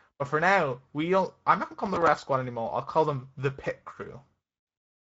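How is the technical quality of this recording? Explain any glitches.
The quality is compromised by one codec fault that runs through the whole recording. From start to finish the speech sounds grainy and hoarse, with a rough, noisy texture that is plainly audible. This is Speex codec damage: the CELP coder, at a middle setting that fits roughly 17 kbps, has too few bits to describe the excitation accurately, so noise replaces fine detail.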